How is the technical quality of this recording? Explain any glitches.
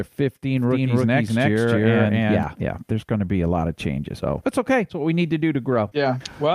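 The recording has two faults: a stretch where the sound is heard twice, and a brief dropout near the end.

From 0.57 s to 2.43 s, just before "yeah there's going to", there is a doubled audio track. The likely cause is the same signal reaching the mix twice, once directly and once through a slower path or a misaligned edit. The second copy trails by roughly a third of a second at about the same level as the original, so every syllable gets a dry, full-band echo with no room decay. It cuts in and out abruptly at the edges of that span.

At 5.89 to 5.93 s, right after "we need to do", there is short concealed packet loss. About 20 ms of the call never reached the decoder in time. The receiver covered the gap by extending the preceding sound for a similar length, then blended back into the real signal. The result is a quick smear or wobble at that point, and any short consonant falling inside the gap may be softened or missing.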